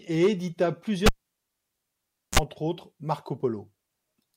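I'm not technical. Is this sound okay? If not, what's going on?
No. Just after "et édita", at about 1.06 s, there is a cable pulled and plugged in: a pop, then near silence for about 1.3 seconds while the lead is out. Just before the sound comes back at about 2.39 s there is a short burst of low mains hum, about 40 ms at 60 Hz, as the plug's tip touches first, then a second pop. That hum and the pair of pops set it apart from a simple dropout, which just goes quiet.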